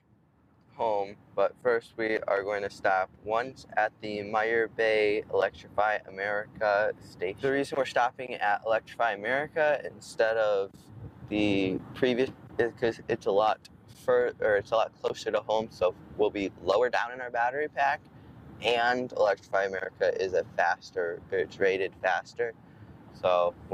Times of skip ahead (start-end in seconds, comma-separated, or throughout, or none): 12.27